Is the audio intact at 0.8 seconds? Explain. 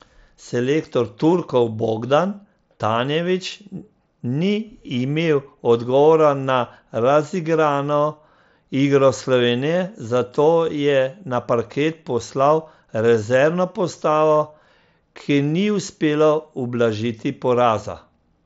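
Yes, the audio is intact at 0.8 seconds, with no fault at that moment.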